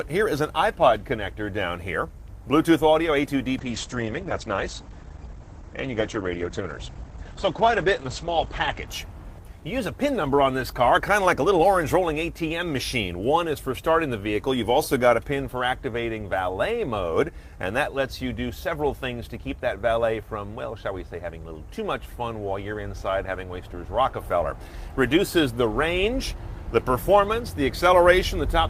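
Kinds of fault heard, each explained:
Call bitrate drop: The call's bandwidth estimate fell and the encoder was pushed to spend far fewer bits, with the sound pointing to a cut from about 48 kbps to about 12 kbps. From 3.59 s to 8.93 s the coding turns coarse and rough, and the top end is chopped as the audio band narrows from 20 kHz to 8 kHz, leaving a muffled, watery sound that holds at its worst for about 5.1 s before recovering.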